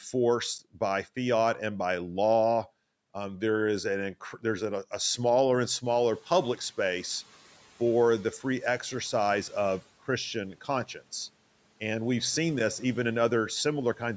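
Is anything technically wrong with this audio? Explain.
Yes. There is noise suppressor catching up from 5.85 to 6.63 s, between "a a smaller and" and "space for the free". The room noise jumps by 15 dB around 6 s, and the suppressor's noise estimate lags behind that sudden rise. For about 780 ms the new background comes through with little reduction, sitting louder behind the speech. It then sinks by about 7 dB as the estimate adapts to the new noise level.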